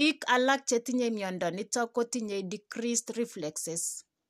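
No technical faults are audible.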